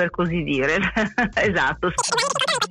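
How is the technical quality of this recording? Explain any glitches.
The recording has one glitch, a wrong sample rate fault from 1.97 s to the end. From that point the samples are played back far faster than they were captured, with no conversion, which fits 16 kHz material being run out at 44.1 kHz. Speed and pitch rise together by a factor of 2.76, so the sound rushes by almost three times too fast and jumps about 17.6 semitones higher.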